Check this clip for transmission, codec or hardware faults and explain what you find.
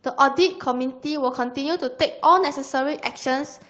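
No transmission, codec or hardware faults turn up anywhere in the speech. It has passed through a call path with an Opus-style codec, and the top of the spectrum stops at about 8 kHz, as expected for that path at this setting.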